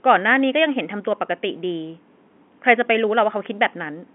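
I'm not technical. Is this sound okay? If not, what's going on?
Yes, nothing's wrong here.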